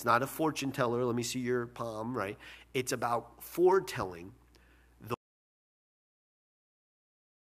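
At 5.14 s the sound cuts off abruptly into silence with no room tone through to the end, an audio dropout to silence, likely from lost input.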